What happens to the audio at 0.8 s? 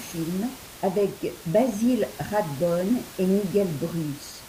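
Nothing goes wrong at 0.8 s: the speech is intact there, with only the room noise sitting about 18 dB below it.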